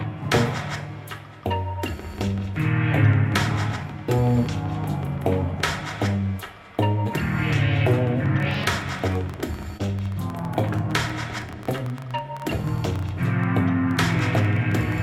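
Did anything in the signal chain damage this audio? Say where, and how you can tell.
Yes. From 8.4 s to the end of the clip at 15 s, a train of clicks rides over the audio. About 10.7 pulses per second arrive at an irregular pace, peaking roughly 5 dB above the programme. The ticks have much the same shape and continue through pauses, so they are not tied to the content. That points to the analogue wiring or interface stage, likely electrical interference or a struggling interface injecting pulses. A codec or network fault would not leave such a steady series of identical, signal-independent spikes.

At 9.77 to 9.81 s there is a short concealed packet loss in the network stage. About 20 ms of audio never reached the decoder in time, and the receiver filled the gap by extending the preceding sound before blending back into the real signal. It is heard as a brief smear or wobble rather than a sharp tick. 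That softer, stretched character, and the fact that it happens only once, separates it from the surrounding clicks, which are abrupt impulses repeating many times.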